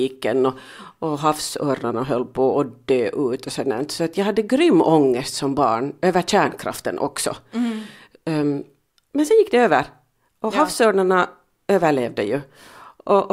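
No technical faults can be heard anywhere in the signal.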